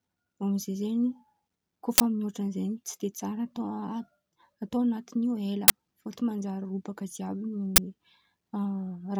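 Short, loud bursts of harsh digital noise cut through the speech at 1.98 to 2.00 s, 5.68 to 5.70 s (just before "fôtiny manjary") and 7.76 to 7.78 s: an uninitialised buffer, where 20 ms blocks were played before audio was written, so leftover memory came out as samples.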